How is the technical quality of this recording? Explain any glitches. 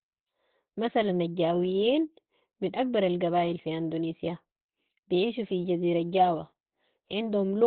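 The quality is poor, with heavy codec damage throughout. The speech is muffled and hoarse, with nothing above about 4.3 kHz. This is likely Opus compression falling back to its narrowband speech (SILK) mode, which fits a low bitrate around 12 kbps. It sounds hoarse rather than swirly as MP3 would, and it is rough rather than cleanly dull as a plain low-pass filter would be.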